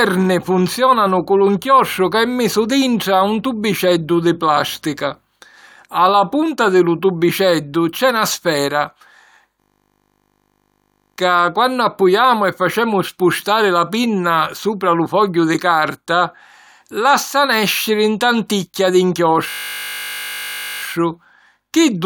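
At 9.6 s the speech freezes into a steady 50 Hz buzz until 11.18 s, and again from 19.5 to 20.82 s. That's a system hang loop: the hardware kept replaying one 20 ms slice of its buffer while the system stalled.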